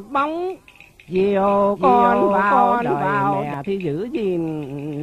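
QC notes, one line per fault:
1.76–3.54 s, doubled audio track: a second full-band copy of the sound runs about 0.7 s behind the original and roughly 5 dB quieter, so everything is heard twice in a flat, dry repeat with no decay or room colour. The copy cuts in abruptly at 1.76 s and drops out just as abruptly at 3.54 s. The likely cause is the same signal being captured again through a slower path, or an edit leaving two out-of-step copies stacked.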